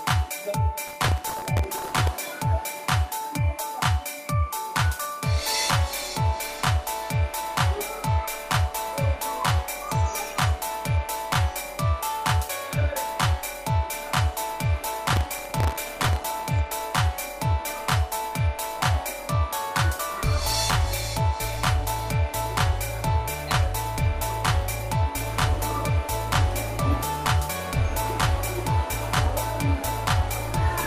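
From 0.88 to 2.12 s, and again from 15.13 to 16.19 s, a burst of processor overload crackle tears through the sound. The processor kept missing its deadlines for very short buffers, well under a millisecond each, and every miss replayed a scrap of old audio with hard edges. It sounds gritty and stops when the load clears. A waveform shows dense jagged discontinuities, and a spectrogram shows broadband vertical streaks across both spans.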